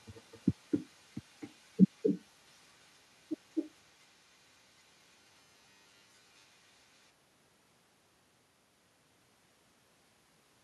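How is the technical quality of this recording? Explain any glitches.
The recording has two clear problems: an echo that runs through the whole clip and two stretches of robotic distortion.

The echo with no canceller is present from start to finish. Every phrase is followed about a third of a second later by a thinner copy, about 7 dB quieter than the original. The other end is playing the call through a loudspeaker, and its microphone picks that sound up again. Nothing removes it, so the talker hears their own voice return after the network round trip.

Robotic sound from repeated short buffers appears from 1.90 to 2.22 s and again, for longer, from 4.95 to 6.20 s. In these spans the speech turns into a rigid, metallic buzz at a fixed pitch of 100 Hz. It still roughly follows the shape of the words. The likely cause is audio arriving too seldom, so the receiver keeps replaying the last 10 ms chunk in place of most of the real signal.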